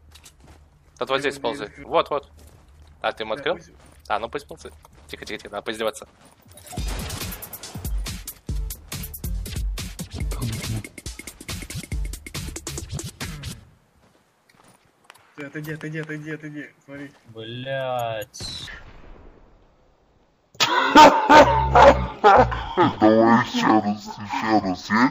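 From 18.67 s to the end at 25.11 s, the audio turns into a case of stereo read as mono: left and right samples are taken in turn as one channel. The sound plays at half speed and drops a full octave (12 semitones). A plain sample-rate mismatch would also slow and lower it, but here a fainter mirrored copy shows up in the upper half of the spectrum, which marks the interleaving error.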